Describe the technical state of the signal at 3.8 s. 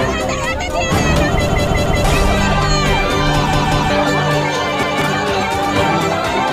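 A repeated buffer spans 3.53 to 3.90 s. Fresh audio arrived late, so the output replayed its last 186 ms block, which fits an 8192-sample buffer, two extra times. It sounds as a stuttering repeat with hard joins, losing roughly 0.4 s of sound.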